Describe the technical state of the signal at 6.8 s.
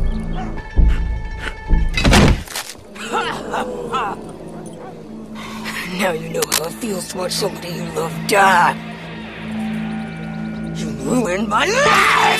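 A brief skip at 6.81 s, where the sound jumps ahead by about one frame, around 20 ms. This is compressed frames skipped: the decoder never plays a single 23.2 ms frame, so the audio on either side is joined with that stretch missing.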